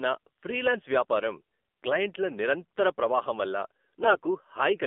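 From the start, the speech runs through the AMR narrowband mobile codec. It is confined to roughly 250 Hz to 3.5 kHz, and the buzzy, synthetic edge fits a low rate near 7.4 kbps.

From 4.02 to 4.19 s, just after "క్లయింట్ల నిరంతర ప్రవాహం వల్ల", AMR bit errors strike. Corrupted frame data misplaces the excitation pulses. The sound turns hoarse and gargly while pitch holds.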